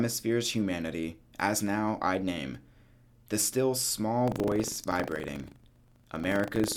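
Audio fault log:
4.24–6.76 s buffer tearing: writer and hardware reader of the ring buffer slipped, so each period carries a small slice of audio about 70 ms old, rattling at 25 Hz.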